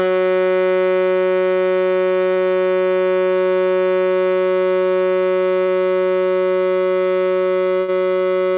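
At 5.66 to 5.70 s, a short concealed packet loss occurs: about 20 ms of the music arrived too late for the decoder, and the receiver patched the hole by extending the sound just before it, then crossfaded back into the real signal. Within the narrow call band, which carries nothing above 4 kHz, this comes across as a tiny smear or wobble in the music.

From 7.80 to 7.90 s, a burst of packet loss takes out a longer stretch, about 80 ms in a row. The receiver again continued the last sound but faded it as the gap dragged on, so a tonal passage turns into a held, dimming buzz and noisier material into a fading hiss. When playback resumes it has jumped ahead, and the music from those 80 ms is simply missing.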